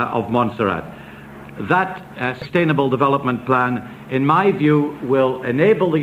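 At 2.42 to 2.46 s, compressed frames are skipped: whole frames never reach the output, so the sound jumps ahead by around 70 ms. The join shows as a short vertical discontinuity in the spectrogram and an abrupt waveform shape change.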